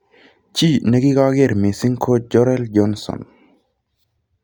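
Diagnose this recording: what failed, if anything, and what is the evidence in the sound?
Nothing failed here: the sound gives no evidence of a fault at any stage of the recording.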